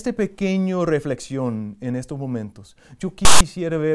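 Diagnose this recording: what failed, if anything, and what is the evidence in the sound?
A block of file tags was played as audio. At the storage or playback stage, the reader treated a tag block, here text metadata, as sample data. Right after "reflexión en estos momentos", from 3.25 to 3.41 s, a burst of loud, hard-edged rasp cuts across the speech for about 0.16 s. The character codes in the text become steady, lopsided sample values, so the burst sits offset to one side of zero rather than sounding like broadband hiss.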